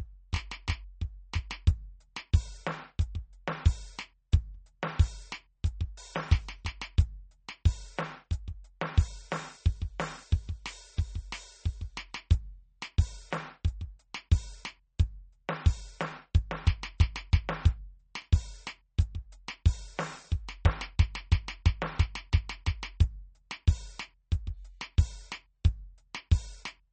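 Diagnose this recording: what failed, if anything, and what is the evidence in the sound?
The codec stage likely failed: MP3 compression runs throughout this music, with nothing above 8.4 kHz and audible swirling. That points to roughly 33 kbps.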